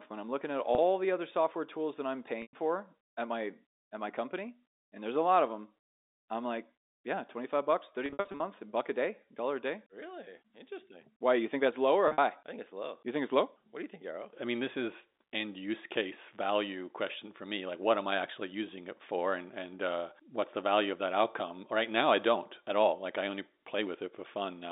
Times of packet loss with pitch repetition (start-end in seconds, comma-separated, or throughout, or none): 0.75-0.78, 2.42-2.53, 8.06-8.40, 12.08-12.18